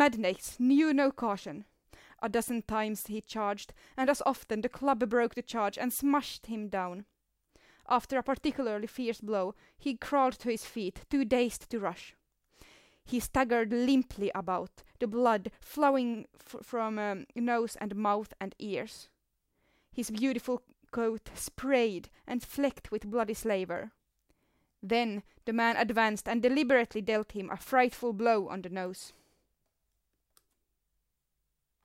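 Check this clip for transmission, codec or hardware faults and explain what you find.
Nothing turns up here, so the speech can be left as it is.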